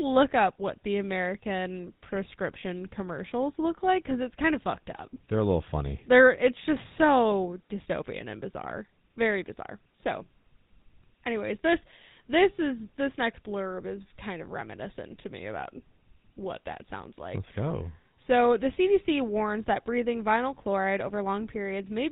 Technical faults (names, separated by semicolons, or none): GSM full-rate codec